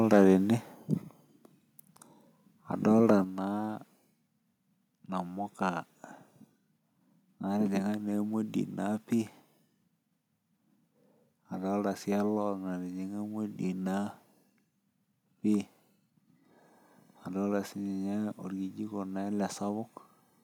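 From 0.12 to 0.33 s the speech shows microphone overload: the loudest peaks are flattened, giving a harsh, crackling edge to those syllables. The likely cause is an input volume set about 4 dB too high, so the waveform tops are pressed against the converter's ceiling and cut square. About 4 percent of the samples in that stretch are clipped. On a spectrogram the clipping shows as smeared broadband energy reaching up into the high kHz range during those peaks.

At 1.02 s the microphone volume steps down: voice and background fall together by about 4 dB in a single instant. At 3.24 s it drops again, by about 5 dB. This is likely the call software reacting to the earlier distortion by lowering the device's input level in discrete steps. On the waveform each change appears as a sudden, clean shrink in envelope height with no ramp. The spectrogram shows a matching uniform darkening across all frequencies, with the noise floor included.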